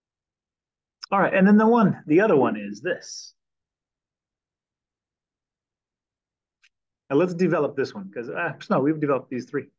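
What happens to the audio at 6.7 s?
Nothing goes wrong at 6.7 s; the audio plays through that moment intact, with no dropout, click or distortion.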